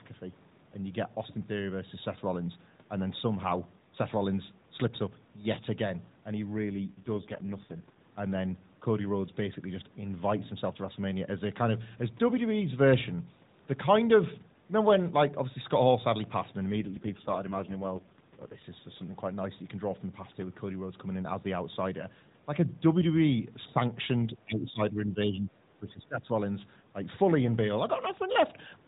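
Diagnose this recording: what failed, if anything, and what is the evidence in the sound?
The codec stage dropped its rate. The narrowband AMR path normally runs at 12.2 kbps, but from 6.70 to 7.99 s and again from 16.76 to 18.66 s it falls to 4.75 kbps. This AMR rate drop makes the speech audibly rougher and more synthetic, with no gap. With fewer bits for the excitation pulses, the spectrogram shows smeared, less distinct harmonics and blurrier formants. The 4 kHz ceiling stays exactly where it was, and the waveform stays continuous.

In the call processing, the level collapses from 24.34 to 25.54 s, by about 15 dB at the deepest, and again from 25.82 to 26.30 s, by about 20 dB. That is roughly a second and then half a second of sound pushed down in pieces. The waveform envelope shows these dips, and the spectrogram shows darkened blocks across the band. This is likely speech suppressed in double talk: the echo canceller mistook overlapping far-end activity for echo and attenuated the near talker.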